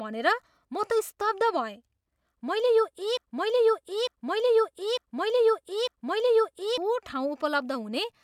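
At 3.17 s the speech falls into a broken-record loop: a 0.9 s fragment repeats exactly, back to back, four times until 6.78 s. A stalled player or stream likely kept resending its last buffered piece, so the audio for that span is lost.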